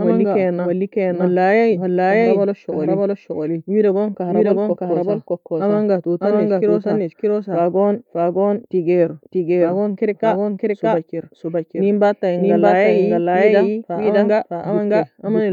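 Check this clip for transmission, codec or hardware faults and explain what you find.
One fault is present: a doubled audio track running through the whole clip. Every stretch of speech is heard twice, with a second full-band copy about 0.7 s behind the first and roughly as loud as it. The likely cause is the same signal being picked up again over a slower path, or an edit that keeps two misaligned copies. Unlike room reverb or acoustic echo, the repeat neither decays nor carries room colouring.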